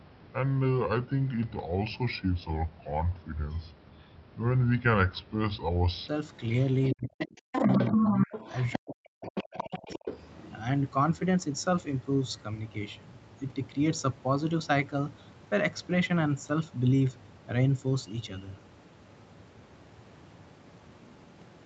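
From 0 to 6.08 s the speech plays at a section at the wrong speed, about 0.71 times normal, so it sounds slow and roughly five semitones deep, likely from a clock mismatch. From 6.61 to 10.17 s the other side's voice leaks through: about 10 dB below the talker at 6.61–6.94 s and 9.25–10.17 s, and at roughly equal level at 7.20–8.79 s. This is likely residual loudspeaker echo the canceller missed. Overlapping that, the talker's speech is suppressed in double talk, with dips at 6.94–7.53 s, 7.95–8.31 s and 8.78–10.06 s. The first and last dips are near-dropouts, roughly 40 dB deep. The middle one is a shallower dip of about 15 dB.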